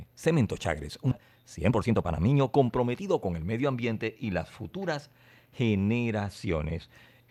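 At 1.11 s the speech jumps forward in a skip ahead: about a second of audio never plays, and the two sides are butted together with no silence or fill between them. It sounds like an abrupt splice, with the flow of the talker cut mid-stream, and the delay drops by about as much. On a waveform the envelope changes shape instantly at the join, and on a spectrogram the harmonic tracks and formants break off and restart at different positions with no gap.

From 1.15 s to 3.40 s a jitter buffer speed-up follows, as the receiver trims a backlog of buffered audio by cutting out short pitch-period-sized pieces again and again, removing about half a second in total. The speech plays at roughly 121% speed while keeping its normal pitch, so it sounds rushed and clipped in rhythm. A spectrogram shows harmonics at unchanged spacing but syllables squeezed closer together. The waveform has compressed syllable envelopes and tiny periodic seams at the cut points.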